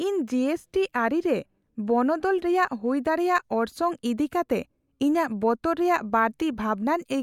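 No technical faults are audible.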